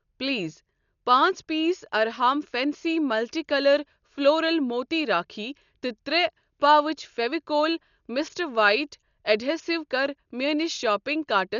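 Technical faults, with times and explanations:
Throughout, Dolby Digital compression, likely: the speech sounds dull, with nothing above 7 kHz, and a rough, fluttering noise clings around its tones. This fits a bitrate near 48 kbps, where many frequency lines get no detail and are filled with dither noise.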